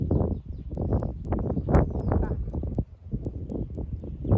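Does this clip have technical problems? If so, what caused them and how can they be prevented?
Yes. From 0.75 s to the end there's a steady tick four times a second, a resampler restarted on every block. Each 250 ms block went from 48 kHz to 16 kHz alone, so every block edge got a small error. To prevent it, run one continuous resampler that keeps its state across blocks.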